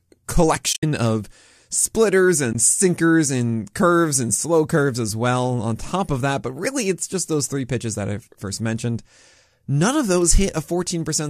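Two soft-edged dropouts break the speech. From 0.73 to 0.83 s, just before "of splitters", the sound fades away for about 90 ms in broken stretches, the longest near 70 ms. At 2.53 to 2.55 s, between "of splitters" and "sinkers and curves and", a shorter 20 ms gap appears. This is AAC frame loss with muting: the decoder zeroed the missing frames' spectrum, and overlapping windows smoothed the edges. The gap lengths fit roughly 10 ms frames, likely from low-delay AAC.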